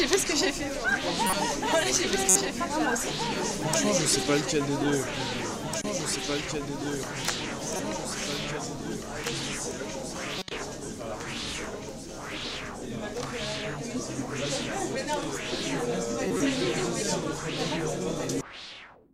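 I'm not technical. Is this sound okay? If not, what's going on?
No, not quite. Six times the sound gets a brief glitch, a short chirp, squeak or blip of noise: at 1.27, 2.29, 5.81, 7.76, 10.39 and 16.28 seconds. Each one is a corrupt frame decoded. The audio was stored in small compressed chunks, a few got scrambled, and the player played them anyway, so sound landed in the wrong place. The ones at 10.39 and 16.28 last a bit longer, and the one at 2.29 is the loudest.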